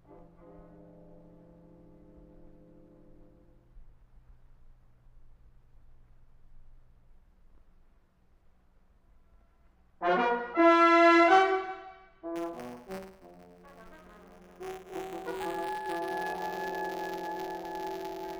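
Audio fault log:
12.35–18.39 s, buffer tearing: a steady 172 Hz buzz rides on the sound. This fits a 256-sample buffer where each period splices in a sliver of audio roughly 10 ms stale.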